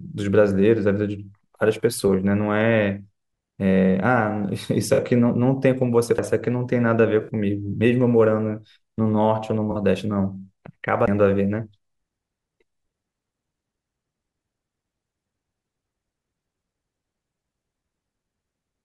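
A faint hiss and roughness runs through the whole clip, riding on loud and bright passages and vanishing in pauses. This is sample clock jitter: the converter clock wavers by under a microsecond, leaving error around 50 dB below the signal.

At 2.08 s a brief smeared, noisy patch appears, the first AAC frame loss with concealment. The decoder rebuilt a missing stretch of roughly 21 ms, which fits a single lost frame, from the preceding spectrum.

From 4.93 to 4.99 s the same phasey smear returns, lasting about 43 ms.

At 6.18 s a tiny tick, with a mute of only a few milliseconds, is followed by an abrupt jump in the sound. This is a CD skip: the laser leapt to another turn of the spiral.

A longer concealed gap runs from 7.21 to 7.29 s, about 64 ms of blurred substitute sound.

Another concealed gap of about 43 ms runs from 9.71 to 9.76 s.

At 11.06 s a second CD skip mutes the sound for roughly 15 ms before playback resumes from a different point on the disc.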